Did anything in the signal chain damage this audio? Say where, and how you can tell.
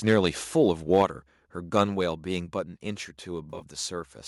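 Yes. Microphone overload at 0.07–0.19 s, 0.93–1.02 s and 1.79–1.81 s. Peaks run about 2 to 4 dB over the converter's limit. Tops flatten into harsh crackle. Likely an input gain set too high before the converter.

Sample clock jitter at the converter, from 0.41 s to the end. A faint hiss rides on loud, bright sounds and disappears in pauses. It is small, about 40 dB down.

Microphone volume stepped down by call processing, at 1.02 s (about 4 dB) and 2.07 s (about 2 dB). Level drops abruptly, the first time right after a distorted peak. Likely automatic gain reacting to clipping.

AAC frame loss with concealment, in the network and decoder, between 3.50 and 3.63 s. Some 70 ms went missing in short gaps, the longest about 30 ms. It sounds like a smeared, noisy or phasey patch.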